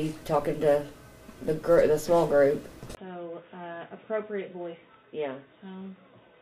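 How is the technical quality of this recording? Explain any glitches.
The recording has one clear fault, an input switched to a poorer device. At 2.95 s the audio drops out for a brief 20 ms gap, then continues to the end with nothing above 3.8 kHz, sounding dull and boxy, about 10 dB quieter, over a faint new noise floor. The likely cause is the system changing to a narrower-band microphone or headset profile. A simple bandwidth cut would not also shift level, noise and tone at once after a gap.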